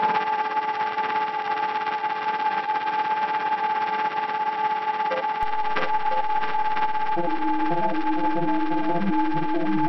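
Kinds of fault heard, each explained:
DC step: At about 5.43 s the waveform's zero line suddenly jumps to a new resting point, roughly -25 dBFS off centre, and it stays there right to the end instead of drifting back. You hear that jump as a single low thump or click, while the sound itself carries on untouched. It's the kind of thing you get when a converter recalibrates mid-stream or an input carrying an offset gets switched in.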